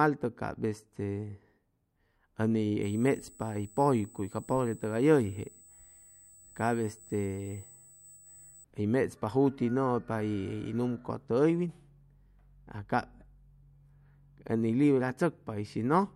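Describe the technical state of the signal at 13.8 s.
At 13.8 s the speech signal is intact, with no audible dropout, distortion, clipping or other technical fault.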